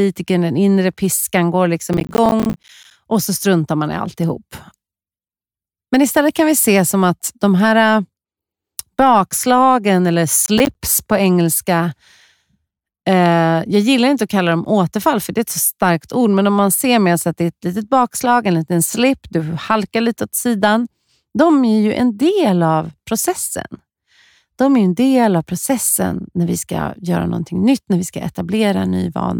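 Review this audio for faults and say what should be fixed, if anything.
Processor overload crackle, 1.93 to 2.91 s (after "den inre piskan går") and 10.46 to 10.75 s (after "bakslagen eller"): a missed run of short buffers, roughly 10 ms each, drops out as silent gaps that tear the speech. Prevent it by reducing processing load or raising the buffer size.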